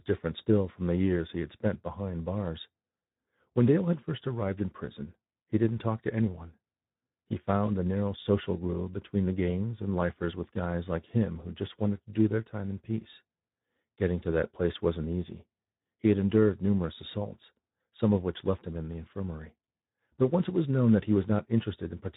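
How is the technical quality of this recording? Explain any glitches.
The technical quality is limited by one fault that runs through the whole recording. Speex codec damage is plainly audible from start to finish. This CELP speech codec rebuilds each frame from a coarsely coded excitation signal, so the speech comes out hoarse and grainy with a noisy edge, consistent with a low setting of around 11 kbps.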